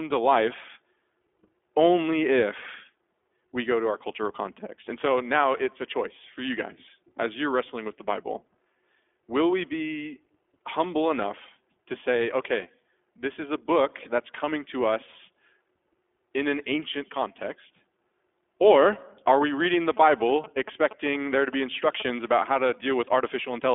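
The speech runs through an iLBC codec for the whole clip, each 20 ms frame coded independently, which fits the 15.2 kbps mode. Nothing above 3.7 kHz survives, so the speech sounds muffled and narrowband, with a plainly audible rough, synthetic grain.

From 19.65 to 22.34 s, GSM signalling bursts from a nearby 2G phone get rectified by the audio circuit. They come through as a galloping dit-dit-dit of short buzzes at about 217 Hz, sitting well below the speech.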